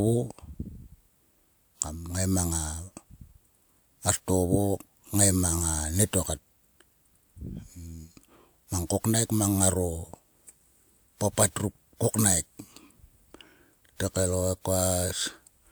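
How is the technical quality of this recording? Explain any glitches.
Nothing in this recording stood out as a technical problem on listening.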